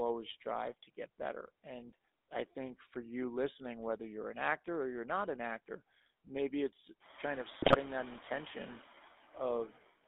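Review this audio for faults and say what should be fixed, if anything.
A noise suppressor is cutting whatever it judges to be steady noise, band by band and frame by frame, by about 17 dB. The background pumps down in the gaps and rises under the speech. The room noise rises by about 18 dB at roughly 7 s. Use gentler suppression with slower smoothing, or reduce the noise at the microphone.

The GSM full-rate codec runs throughout, consistent with 13 kbps. It rebuilds speech from a vocal-tract model driven by a coarse pulse excitation, inside a band of about 250 Hz to 3.6 kHz. The result is a buzzy, gravelly roughness and a muffled top that are plainly audible. Move the call path to a wideband codec such as AMR-WB or Opus.

GSM bit errors hit from 7.62 to 7.77 s, which fits about seven frames damaged at an error rate near 2.4%. Corrupted filter, pitch and gain values reach the decoder and distort the spectrum and level, so the speech breaks into squawks and gargling. 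Improve the radio link or use stronger channel protection and bad-frame concealment.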